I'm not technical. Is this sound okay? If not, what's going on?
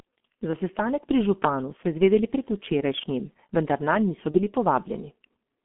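No. The whole recording was squeezed through the G.723.1 codec, an early internet-phone system that packs the voice into very little data and keeps only a narrow telephone band, roughly 200 Hz to 3.4 kHz. Throwing away that much detail, and heavily at that, makes the speech muffled and hoarse throughout, and sharp consonant sounds come out smeared instead of crisp.

There is also VoIP packet loss concealed by the speech codec, between about 4.31 and 4.39 seconds. A small piece of the transmission went missing, which fits a single lost 30 ms packet. Instead of leaving silence, the decoder guessed by stretching the sound just before it and letting it fade. The result is a brief buzzy or smeared patch, and the voice takes a moment to recover afterwards.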